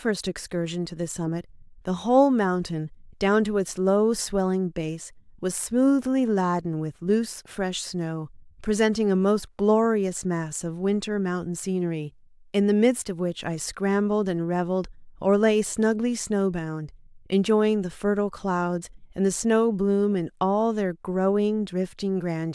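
No technical faults can be heard anywhere in the recording.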